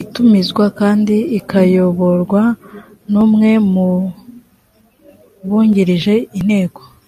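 No technical faults can be heard anywhere in the recording; the signal stays continuous and steady throughout.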